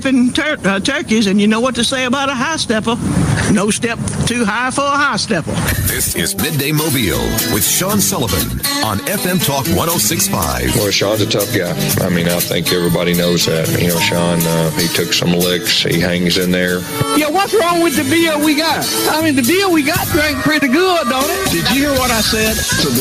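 Gain pumping runs through the whole clip: the gain swings by roughly 10 dB, pulled down under each loud moment, likely from gain set too hot with a fast limiter clamping down. Then there's a burst of processor overload crackle from 12.19 to 12.37 s, a quick run of tiny dropouts to silence that points to a few missed buffers of around 5 ms each while the processor couldn't keep up.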